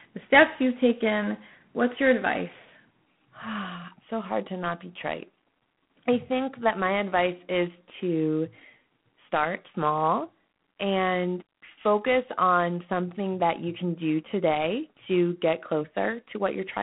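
From start to finish the speech carries G.726 ADPCM damage: a harsh, rasping hiss that rises and falls with the speech level, which fits 24 kbit/s coding of sample-to-sample prediction error. The band runs roughly 150 Hz to 3.4 kHz, with nothing above 3.9 kHz.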